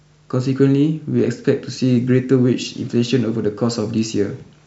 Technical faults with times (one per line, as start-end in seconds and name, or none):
none